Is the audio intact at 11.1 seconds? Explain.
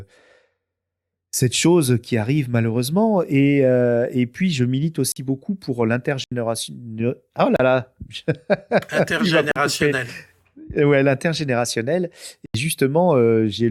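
Yes, at 11.1 seconds the speech plays through intact, with no dropout, click, distortion or other fault at that moment.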